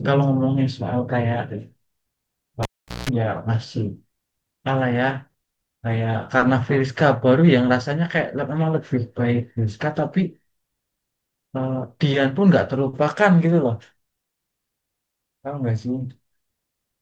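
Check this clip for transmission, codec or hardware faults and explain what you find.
One hardware fault turns up in this speech clip: a cable pulled and plugged in, between 2.63 and 3.09 s. A pop marks the live connector breaking contact, and the signal drops to near silence for about 0.41 s. While the plug is half seated, with only the tip touching, it picks up 60 Hz mains buzz for 0.19 s. A second pop brings the speech back. The waveform shows two sharp spikes around a flat stretch. The spectrogram shows full-height vertical lines at each pop and stacked 60 Hz harmonics during the buzz.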